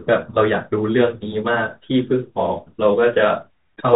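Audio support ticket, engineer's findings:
Bluetooth CVSD headset codec, throughout. Spectrogram empty above 4 kHz. One-bit delta steps lag loud peaks, so s sounds scratch. Granular hiss shows as a speckled noise floor.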